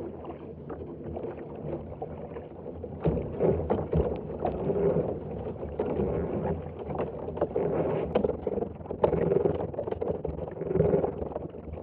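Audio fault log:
8.13–11.83 s, overlap-add ripple: level pumps about 11 dB around 20 times a second, a rough robotic flutter, because the rebuilt frames' overlap doesn't sum evenly.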